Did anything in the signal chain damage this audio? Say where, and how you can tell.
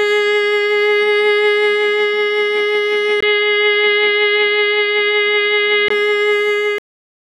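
Yes. From 3.21 s to 5.90 s the music turns dull, with nothing above 4.9 kHz. A 20 ms gap opens at the switch. A faint new noise floor appears, roughly 55 dB down, while the level stays much the same. This is likely an input switched to a poorer device at the driver stage.

A cut-off end follows at 6.78 s, in the buffer or storage stage. The music stops mid-sound and drops straight to digital silence, with no natural decay. The final buffers were never written, so the last part of the clip is simply missing.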